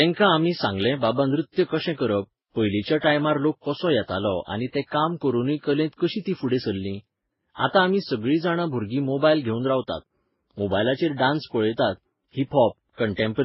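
Throughout the speech, the likely cause is transcoding between lossy codecs, with a very low-bitrate first stage re-encoded by later codecs that spent their bits reproducing its damage. Nothing remains above 5.6 kHz, so the sound is muffled, with layered warbling, swirly smearing.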